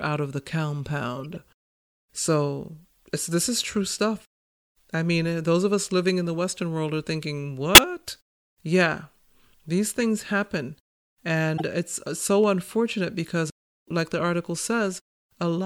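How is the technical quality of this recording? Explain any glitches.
Three short glitches break up the speech, each a corrupt frame decoded. Damaged compressed frames were played anyway, so energy lands at wrong frequencies. At 1.19 to 1.36 s, several frames produce a faint glitch. At 7.75 s, after "world are thinking", a brief glitch hits, the loudest of the three. At 11.57 s, just before "it's uh so unfortunate", a moderate glitch sounds.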